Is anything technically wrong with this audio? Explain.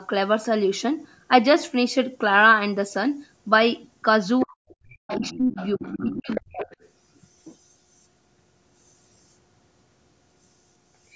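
Yes, there are three related faults, all clustered between about 4.4 and 6.9 s, where both ends of the call seem to be sounding at once.

Other side's voice leaking through: a faint second voice appears under the speech from 4.39 to 4.46 s, then more clearly from 4.68 to 6.41 s, sitting roughly 15 dB below the talker, and again from 6.59 to 6.89 s at a fainter level, around 25 dB down. The likely cause is the far-end audio playing from the talker's loudspeaker and re-entering the microphone, with the echo canceller failing to subtract all of it.

Speech suppressed in double talk: the talker's own voice dips sharply in three places. There is a brief, deep cut of roughly 35 dB from 4.46 to 4.51 s, a shallower dip of about 20 dB across 5.16 to 5.58 s, and the longest and deepest one, near 40 dB, from 5.75 to 6.67 s. Each falls within or right next to the leaking far-end voice, so this is likely the canceller hearing both voices together, failing to separate them, and turning everything down.

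Background gated by the echo canceller: from 4.79 to 4.88 s the room tone underneath drops by about 22 dB and then returns, a brief dip in the ambience. This is the canceller clamping the microphone hard while the loudspeaker is active and releasing it a moment later. The call's microphone processing, which leaves nothing above 8 kHz, is a normal trait of call audio and not part of these faults.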